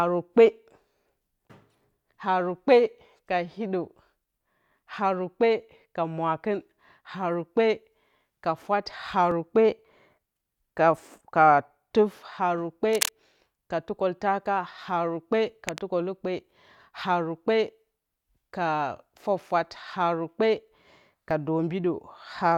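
A speech recording with two kinds of fault. Overlap between stream segments shows up as tiny skips at 9.31 s, just after "ka fwat", and at 21.31 s. A few milliseconds of audio are trimmed at each join and the waveform jumps; the spacing fits segments about 6 s long. Cable scratch noise adds bursts of rough, uneven crackle from 12.93 to 13.09 s after "tuf haru kpe", nearly as loud as the speech, and from 15.67 to 15.85 s after "ka tukǝltaka haru kpe", much quieter. The likely cause is a worn cable or connector being moved, changing its contact resistance.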